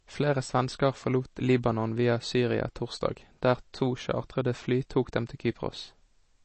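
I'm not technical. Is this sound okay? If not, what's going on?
No. The whole recording has a thin, clearly watery sound. There is nothing above about 8.3 kHz, so the crisp top of the speech is missing, and s sounds come out dull or fizzy. The cause is likely MP3 compression. The file was squeezed hard to save space. The encoder dropped the highest sounds and threw away quieter detail that flickers in and out, which leaves that swirly, underwater quality.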